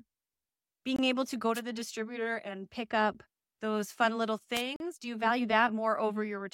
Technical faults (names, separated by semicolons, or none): Bluetooth stall; wireless microphone noise hit